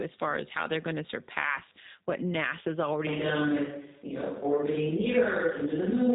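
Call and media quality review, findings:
Rough, slightly synthetic speech throughout, nothing above 3.8 kHz. G.729 codec at 8 kbit/s; plainly audible damage from low-rate pulse-coded voice reconstruction.

From 3.07 s to end, voice turns roomy and hollow, thinner bass, level about the same, faint room noise. Likely switch to a distant microphone.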